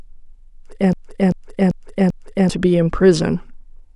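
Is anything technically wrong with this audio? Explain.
Yes. A broken-record loop runs from 0.93 to 2.49 s. A 0.39 s fragment of the speech repeats exactly, four times, back to back. Each repeat is identical, so the sound stutters in a rigid, mechanical rhythm instead of moving forward. The likely cause is a stall in the player, encoder or stream, which kept resending the last fragment it held. Whatever speech belonged in that stretch is missing.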